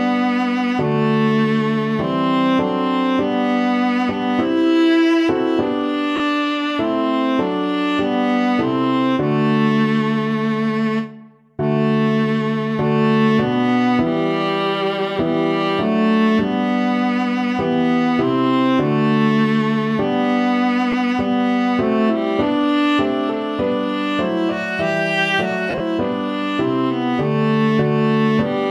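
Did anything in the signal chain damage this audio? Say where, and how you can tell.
Yes, the damage is at the Bluetooth link and its codec: lost LE Audio frames in three spots. There's a brief noisy smear at 6.16–6.20 s, which fits about 40 ms missing, and a shorter one at 20.92–20.94 s. At 25.70–25.80 s, about 60 ms is lost in patches, with the longest run around 40 ms. The LC3 decoder fills each gap by replaying the last spectrum with random signs, so tones blur into noise.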